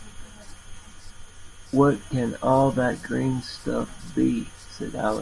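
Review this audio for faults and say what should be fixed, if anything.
Nothing here needs fixing: no faults turn up anywhere in the speech, so there's nothing to chase down or prevent.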